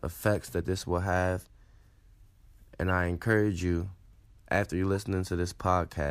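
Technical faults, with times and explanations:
2.89 s and 4.95 s, corrupt frame decoded: two brief blips, the first just before "I encourage you" and the second right after "after you're". Each lasts only about 12 ms, which points to a single damaged compressed frame that the decoder played anyway. Flipped bits scrambled its gains or codes, so energy landed at the wrong frequencies for that instant and came out as a short chirpy squeak. The second one is a touch louder, peaking around -25 dBFS against about -30 dBFS for the first.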